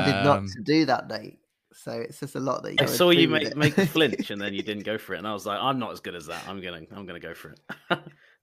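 Damaged data in the compressed stream strikes at 2.73 s and lasts about 70 ms, to 2.80 s, right after "just a lot that" and before "saw you make make". Bytes in that stretch of the encoded file are corrupted, so the decoder misreads those frames, loses its place in the bitstream and hunts for the next valid frame header. What comes out is a brief chirp or squawk standing in for the speech until decoding resynchronises.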